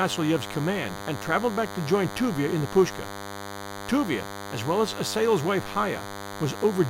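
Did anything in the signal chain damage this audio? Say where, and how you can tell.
Yes. The analogue stage picked up DECT cordless phone buzz, present for the whole clip and sitting only modestly below the speech. A nearby DECT handset or base transmits a radio burst every 10 ms. The wiring picked up those bursts and the audio circuit rectified them, producing a thin 100 Hz buzz full of high harmonics. Mains hum differs: it is smoother, centred at 50 or 60 Hz, and carries little energy far up the spectrum, unlike this gated, rasping pulse train.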